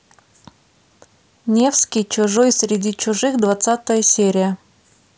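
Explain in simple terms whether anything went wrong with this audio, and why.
From 1.53 s to 4.26 s, the speech picks up a steady buzz, about 15.6 times a second. This is a block size mismatch (padded). One step hands on chunks of audio that are a little too short for the next step. The missing part of each chunk is filled with silence. Those tiny silent gaps repeat at the chunk rate, and that makes the buzz. The rate fits chunks of 1024 samples. The slowdown is only slight.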